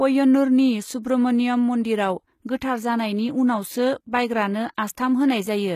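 Throughout the speech, the treble sounds bright but synthetic, with gritty, metallic s sounds. This is HE-AAC compression, likely at a very low bitrate of about 20 kbps. The upper band is rebuilt from copied lower bands, so its harmonics don't align with those below. A spectrogram shows repeated, blocky high-band texture above the crossover and nothing above 14.9 kHz.

From 1.02 to 1.05 s comes pre-echo. A short hiss precedes a sharp attack, which sounds softened. The codec spread quantisation noise across its whole block, so noise sized for the loud onset also fills the 23 ms of silence before it. The waveform shows a noise smear ahead of the transient.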